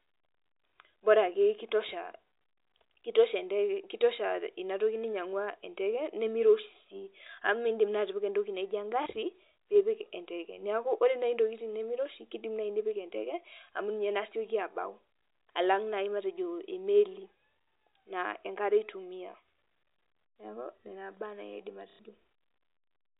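At 9.03 s and again from 21.9 to 21.99 s there's packet loss with the last packet repeated: roughly 30 ms, then 90 ms, replayed, giving a small blip, then a robotic stutter over the G.711 telephone band.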